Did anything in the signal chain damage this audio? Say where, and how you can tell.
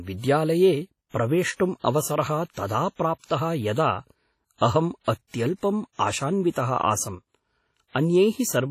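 Yes. WMA compression is audible throughout at the codec stage: a ringing, washy hiss that breathes with the signal, and nothing above 15.6 kHz. The likely cause is a heavily damaging low-bitrate WMA encode.

Pre-echo appears at 3.18–3.24 s and 6.50–6.56 s. Hiss arrives about 51 and 56 ms before attacks because the codec spreads quantisation noise across each block.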